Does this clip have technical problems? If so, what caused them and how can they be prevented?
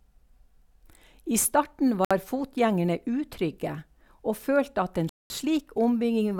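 Yes. The speech drops abruptly to dead silence twice, first from 2.05 to 2.11 s (about 60 ms) and again from 5.09 to 5.30 s (about 210 ms), then resumes. This pattern points to a likely Bluetooth stall: radio interference delayed packets, the headphones' buffer emptied, and playback paused until the retransmitted audio arrived. Keeping the phone close to the headphones, with a clear line of sight and away from busy 2.4 GHz sources such as Wi-Fi routers, prevents this.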